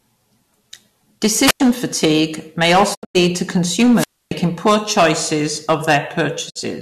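Speech clip with three faults. Hard clipping runs throughout. The signal is overdriven by about 12 dB, so a few percent of samples are cut flat, giving harsh fuzz on loud syllables. Wireless microphone squelch dropout occurs twice. Hiss rises, then the receiver mutes: at 1.45 to 1.60 s for about 95 ms, just before "fatigue may", and at 3.95 to 4.31 s for about 280 ms, just before "poor choices". A weakening FM radio link is the cause. Digital broadcast dropout also occurs twice. At 2.93 to 3.17 s, just after "fatigue may", 168 ms is lost in short holes across 192 ms, with 20 ms fades and a longest gap of 96 ms. At 6.49 to 6.57 s, 48 ms vanishes. Both point to corrupted or missing received frames being muted.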